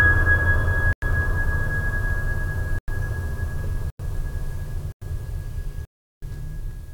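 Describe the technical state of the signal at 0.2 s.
At 0.2 s the music plays through cleanly, with no dropout, distortion, click or other fault to be heard at that point.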